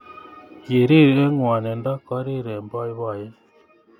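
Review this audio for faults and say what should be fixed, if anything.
From 1.02 to 2.42 s a fast ticking, zipping texture rides on the speech while its level falls by about 10 dB. This is zipper noise. The gain reduction is applied in coarse steps, around fifty a second, with no smoothing between them. Each jump puts a small discontinuity in the waveform, and the run of tiny clicks fuses into a buzz that lasts for the whole fade. To prevent it, interpolate the gain per sample, or ramp it across each buffer, rather than updating it once per block.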